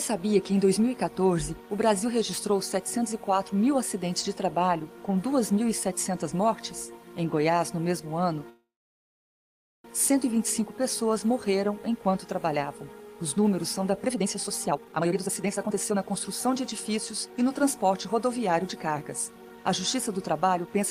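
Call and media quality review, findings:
Call audio freeze, 8.49–9.86 s. Brief fading buzz, then about 1.15 s of silence. Likely jitter buffer underrun from delayed packets. Audio resumes where it stopped; nothing lost.

Jitter buffer speed-up, 14.03–20.67 s. Audio runs about 120% speed, same pitch, sounds hurried. Receiver trims pitch-period chunks, roughly one and a half seconds, to cut built-up delay.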